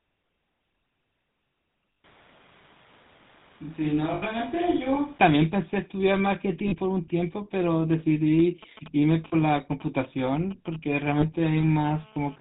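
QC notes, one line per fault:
Throughout: GSM full-rate codec. The speech has a buzzy, gravelly roughness and nothing above 4 kHz, because the codec models the vocal tract and drives it with sparse regular pulses, keeping little of the excitation. The damage is plainly audible, which fits the 13 kbps full-rate codec.
1.94, 4.14–4.23, 6.68–6.75, 9.28–9.34 and 11.18–11.24 s: lost GSM frames. Gaps of 80 ms (first two) and 40 ms (last three) are filled by repeating the last good frame's settings, so the sound briefly hangs in a rough, metallic ring instead of dropping out.
2.04–5.18 s: switch to a distant microphone. The speech abruptly turns roomy and hollow, loses bass, drops a few dB and gains background noise roughly 30 dB below the speech, then snaps back. The likely cause is the close microphone failing and a farther one taking over.
8.39–11.47 s: GSM signalling bursts. A galloping dit-dit-dit of short 217 Hz buzzes, about 15 dB below the speech, comes from a nearby 2G phone sending short groups of radio bursts while signalling, which the audio circuit rectifies into sound.
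11.57–12.36 s: GSM phone buzz. A hard, raspy 217 Hz buzz with many harmonics, about 24 dB below the speech and unrelated to it, comes from a nearby 2G phone in a call transmitting 217 bursts per second that the audio circuit rectifies.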